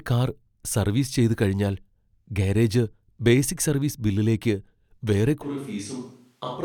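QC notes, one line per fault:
5.44 s to end, switch to a distant microphone: right after "ബേസിക് സർവീസ് ബില്ലിലേക്ക് വേറെ" the speech suddenly turns roomy and hollow, thinner in the bass and about 10 dB quieter, with more room noise. Likely the close mic dropped out, leaving only a far-off pickup.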